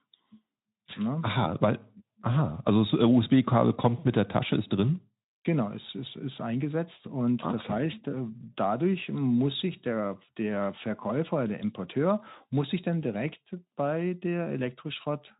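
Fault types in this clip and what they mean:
Nothing's wrong with this speech clip, so there's no fault to list here.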